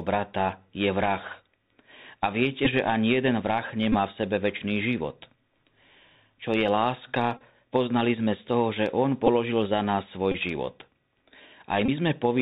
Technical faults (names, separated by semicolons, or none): Bluetooth CVSD headset codec; Bluetooth headset packet repeated